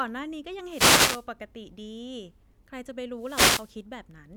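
At 0.65 s the speech is disturbed by a wireless microphone noise hit lasting until 1.28 s, and a second one follows from 3.15 to 3.78 s, each about 0.6 s long. The FM radio link fades as reflected paths cancel, so receiver hiss rises over the voice, heard as a swish of static. A spectrogram shows broadband noise filling the band; the waveform shows a dense noise envelope.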